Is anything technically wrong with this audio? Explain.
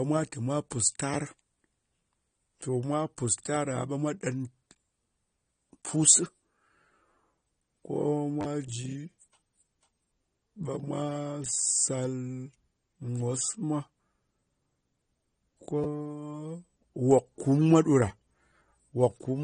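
Yes, there are two problems.

Throughout the speech, a lossy encoder, likely AAC compression at a low bitrate around 32 kbps, has discarded detail to save data. It cut everything above 9.7 kHz and quantised the remaining bands coarsely against a hearing model. The result is plainly audible: the speech sounds dull and smeared, with sibilants losing their crispness and a warbling, fizzy texture on sustained sounds.

At 8.41 to 8.45 s, and again at 15.84 s, there is a repeated buffer. Fresh audio didn't reach the output in time, so the device replayed its last short chunk, which fits a 10 ms buffer. At 8.41 s that chunk loops several times over about 40 ms, giving a brief buzzy stutter with hard joins. At 15.84 s a single repeat produces a quick click-like hiccup. Around 40 ms and 10 ms of new audio are lost at those points.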